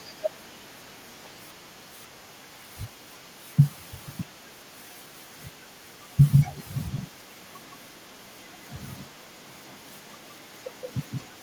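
From 0 to 6.32 s a faint delayed copy of the speech trails it by 262 ms, about 35 dB down; from 6.48 s to the end the lag shortens to 166 ms, about 30 dB down. This echo leak, likely from incomplete echo cancellation, repeats discretely rather than smearing like room reverberation.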